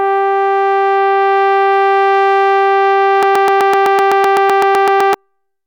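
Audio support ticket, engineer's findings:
Broken-record loop, 3.23 s to 5.14 s. A 127 ms fragment of the music repeats back to back, fifteen times, with no gap. Likely a stalled player or stream resending its last held buffer. The music due in that span is lost.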